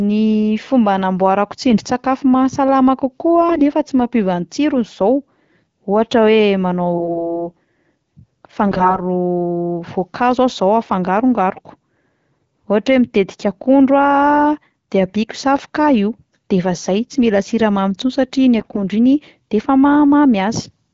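Speech carried over AMR-WB at 12.65 kbit/s has five bursts of AMR bit errors: 1.70–1.80 s just after "fomba hanamboarako", 3.48–3.62 s, 6.94–7.48 s after "ohatra hoe", 8.68–9.01 s, and 18.58–18.79 s. In each burst the pitch and level hold, but the sound turns hoarse and gargly. This is consistent with about 5 to 10 percent of the weakly protected bits flipping while the frame checksum still passes. The excitation pulses and the fine pitch, gain and spectral values are then decoded wrong.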